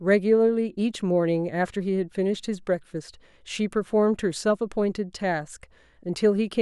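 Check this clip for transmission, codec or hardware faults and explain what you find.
No technical fault can be heard anywhere in the speech, and the signal stays continuous and intact throughout.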